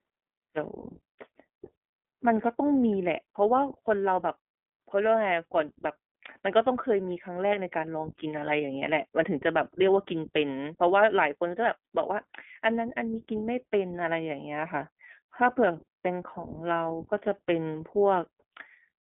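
From start to finish the speech carries the sound of the iLBC codec, a narrowband VoIP coder. Everything sits between roughly 200 Hz and 3.5 kHz, so sibilants lose their edge and the low end thins. Each 20 ms frame's excitation is coded on its own, leaving a plainly audible rough, synthetic grain, which fits the 15.2 kbps mode. A spectrogram shows a hard ceiling at 3.5 kHz with a band-limited gap below 200 Hz.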